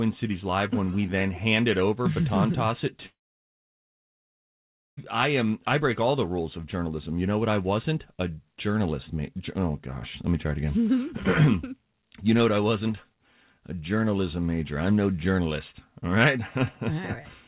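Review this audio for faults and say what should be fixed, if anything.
Right after "toss it", from 3.06 to 4.99 s, there's what's likely a long network dropout. The last sound trails off briefly, then there's about 1.8 s of near-silence, and the audio picks up again at "I am I break" with about 1.9 s simply gone. The band-limited sound, with nothing above 4 kHz, fits a G.711 call path. To prevent it, steady the network link, with a more reliable connection or added redundancy, so packets keep arriving.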